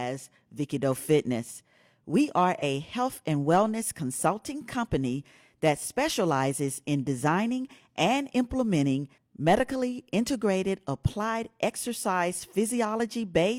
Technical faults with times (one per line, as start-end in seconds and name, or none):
2.58-2.62 AAC frame loss with concealment